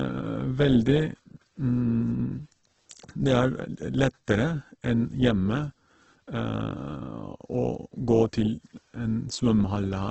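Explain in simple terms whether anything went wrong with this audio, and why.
Opus compression, throughout: the speech sounds dull, rough and grainy, with nothing above about 8.2 kHz, likely because the codec had too little data and filled the gaps with noise.

Pre-echo at 2.9 s: a short hiss creeps in about 14 ms before a sharp sound. The codec spread its noise across a whole chunk, including the quiet moment before that attack.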